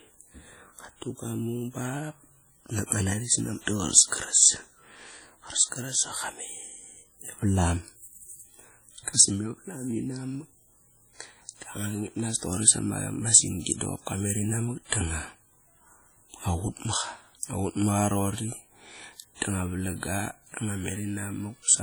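Throughout the speech, heavy codec damage rings and washes, with hiss that breathes with the signal. This is likely WMA compression, fitting about 32 kbps.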